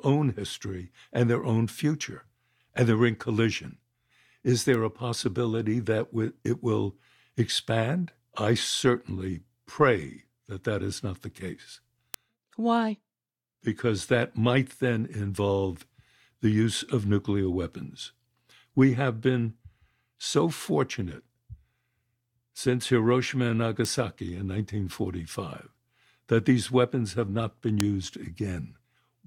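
Four bit error spikes break into the speech. Each is one flipped bit in a sample or a few in a row, so the value leaps and returns. At 4.74 s, before "a possibility that it", a tick peaks about -15 dBFS. After "is not the case", 12.14 s hits about -3 dBFS. At 23.85 s it reaches about -9 dBFS. After "weapons have not been", 27.80 s spans three samples, about -3 dBFS. Each is a sharp, broadband click.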